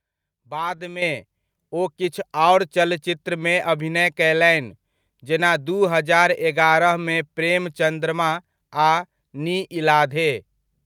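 At 1.02 s the microphone volume is stepped up by about 8 dB in a single jump, as the capture side raises the device's input gain. Speech and background noise rise together, which separates it from a talker simply speaking louder.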